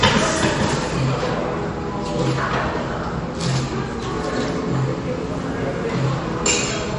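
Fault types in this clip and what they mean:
MP3 compression: The likely cause is an MP3 encoder starved of bits. It chopped off the top of the spectrum, and nothing is left above 10.6 kHz, which points to a bitrate around 40 kbps. With so little to spend, it also kept dropping quieter frequency components from frame to frame. That leaves the audio throughout dull and lacking air, and the coding damage is plainly audible as an unstable, processed texture rather than clean detail.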